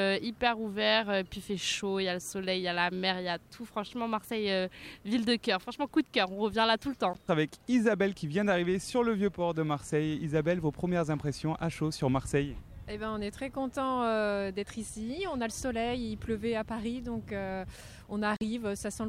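At 7.13 to 7.17 s the sound drops to silence, and again at 18.37 to 18.42 s. The edges are abrupt or fade over a few milliseconds. Playback resumes further on, as if it had kept running. This is likely a Bluetooth dropout: late packets were discarded, about one frame's worth, then three.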